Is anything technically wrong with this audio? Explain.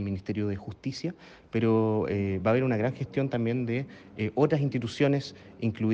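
No, no technical faults.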